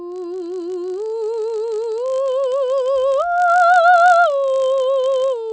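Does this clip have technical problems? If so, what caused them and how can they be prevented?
Yes. Throughout the music there is a 50 Hz buzz from a resampler restarted on every block. Each 20 ms block was converted on its own, with a glitch at every edge. A spectrogram shows faint vertical lines every 20 ms, and the waveform shows small steps there. Resampling as one continuous stream, carrying filter state across blocks, prevents it.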